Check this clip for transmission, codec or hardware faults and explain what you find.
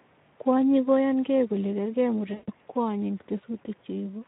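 Two faults are present: low-rate codec damage throughout, and one concealed packet-loss gap.

Across the whole speech clip the Speex codec is running at a low quality setting, in line with a rate of around 11 kbps. With so few bits for the excitation signal, the CELP model cannot rebuild the fine structure of the voice, so the speech sounds plainly noisy and hoarse. The upper band above 4 kHz, where present, is only a shaped noise fill, not real detail.

From 2.33 to 2.53 s, just after "koyan kee kole kergee", there is VoIP packet loss concealed by the speech codec. About 140 ms of audio is missing, which fits seven lost 20 ms frames. The decoder fills the hole by repeating its last pitch and filter with gain falling frame by frame. The voice stretches into a buzzy tone or coloured noise that fades, and stays weak and distorted briefly after the packets resume.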